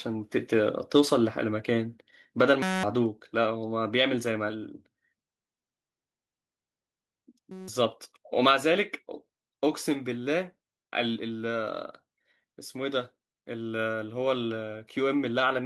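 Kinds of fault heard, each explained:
System hang loop: the machine stalled while the sound card kept replaying the same tiny slice of its buffer, so you get a short burst of exact repeats. Here it happens twice, at 2.62 to 2.83 s and 7.52 to 7.68 s. Each loop is 5.33 ms long, which fits a 256-sample buffer, so instead of a stutter you hear a steady 188 Hz buzz. Roughly a fifth of a second of speech goes missing the first time, about 0.15 s the second.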